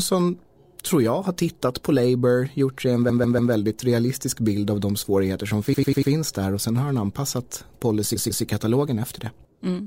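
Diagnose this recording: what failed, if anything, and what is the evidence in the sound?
Repeated frames in the compressed stream, at the storage or transmission stage. The speech stutters three times. From 3.09 to 3.52 s, after "gjort sig en", a 144 ms slice plays three extra times. From 5.73 to 6.11 s, after "av de svårigheter som", a 96 ms slice repeats four times. From 8.15 to 8.44 s, after "sen har han anpassat", a 144 ms slice returns twice. The decoder was fed the same frames again, so the audio runs longer by each repeated stretch.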